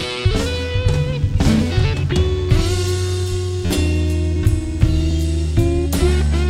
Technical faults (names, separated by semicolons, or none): DECT cordless phone buzz; repeated buffer